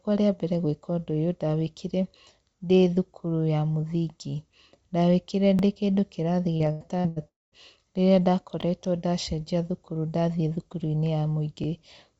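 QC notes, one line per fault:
5.59, 8.61 and 11.64 s, overlapping chunks: A small click-like stutter is heard at each join, the first just before "ndĩkĩndũ kĩrathi" and the second just before "ndacenjia thukuru ndathiĩ". The joins fall every 3 s. Each new chunk starts about 23 ms early, so that sliver of speech plays twice.
6.57–7.19 s, repeated packet loss (robotic sound): Right after "ndĩkĩndũ kĩrathi" the speech turns choppy. Four gaps open here, the longest 85 ms. Each is patched by stretching the last sound, so 38% of this stretch is fill rather than real speech.
7.28–7.55 s, long network dropout: The sound smears into a fading buzz, then about 190 ms of silence follows before speech resumes with a piece missing. This is likely a network dropout, where the receiver kept extending the last sound until it had nothing left to play.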